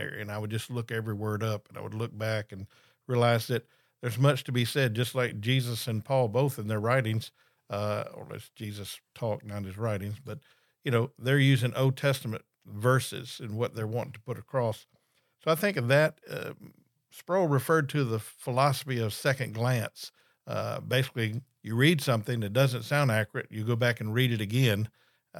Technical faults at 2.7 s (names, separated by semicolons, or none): none